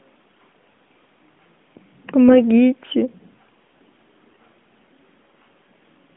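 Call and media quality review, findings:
AMR bit errors, 2.28–2.40 s and 4.30–4.40 s: weak radio link flipped a few percent of unprotected bits in AMR-NB frames, about four or five 20 ms frames per burst. Mispositioned excitation pulses and wrong gain and spectral values make the voice briefly hoarse, scratchy and gargly at roughly unchanged pitch and level, within the 200–3500 Hz line band.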